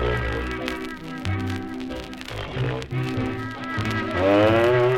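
Nothing goes wrong anywhere in this clip, so there's no technical fault to point to at any moment.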